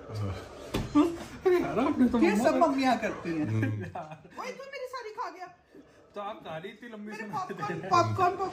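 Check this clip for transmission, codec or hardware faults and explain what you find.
One fault type is present: zipper noise, in two passages. From 3.37 to 4.16 s the level falls by roughly 15 dB, and from 7.25 to 8.03 s it rises by about the same amount. Each change is applied in unsmoothed steps of about 3 dB, at around seven per second. Every abrupt gain jump puts a small discontinuity in the waveform, so a ticking, zipping texture rides on the audio while the level moves.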